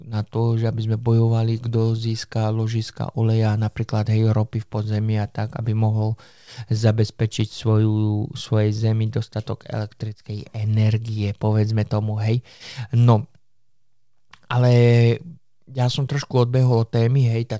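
No faults found in this speech; the call path shows only the expected wideband codec band limit, with nothing above 8 kHz.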